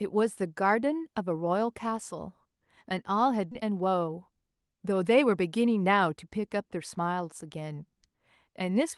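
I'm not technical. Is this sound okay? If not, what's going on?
No. At 3.51 s there is a skip ahead: the call system dropped about seven-tenths of a second of speech, so the talker jumps forward with no gap. From 3.63 to 5.36 s a jitter buffer speed-up trimmed tiny slices, about a fifth of a second in all, to catch up, so the speech sounds hurried, about 12% faster, at normal pitch.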